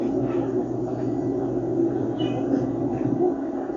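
Listening to these sounds, nothing stood out as a technical fault at any point.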